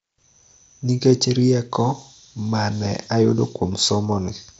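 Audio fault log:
No faults heard anywhere in this speech recording.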